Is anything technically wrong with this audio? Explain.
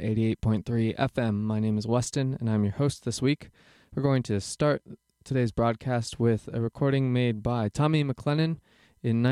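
Yes. From 0.11 to 9.28 s there's a faint rattle of clock slip clicks, a tick roughly every 40 ms, likely from two unsynced clocks about 500 ppm apart dropping or repeating single samples.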